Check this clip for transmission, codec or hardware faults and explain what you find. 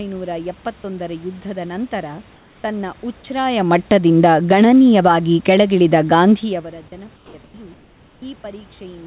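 Two kinds of fault turn up, both from a transmitter that stops sending during what it judges to be silence; the audio is band-limited to 4 kHz by the call codec.

Sound dropped by the voice detector occurs at 0.82 to 0.84 s, 6.88 to 6.92 s, 7.16 to 7.34 s and 7.44 to 7.54 s. The sender likely misread quiet or trailing speech as background and stopped transmitting, so the receiver substituted comfort noise. Speech briefly gives way to flat noise, clipping roughly 10 to 70 ms of sound each time.

Comfort noise in place of the background runs from 2.36 to 2.64 s, during a pause where the room noise sits about 35 dB below the loud speech. With no speech detected, the sender likely switched to discontinuous transmission, and the receiver generated synthetic noise of a similar spectral shape. The real background is replaced for 280 ms by a smooth, featureless hiss about 2 dB quieter, then the natural room noise returns.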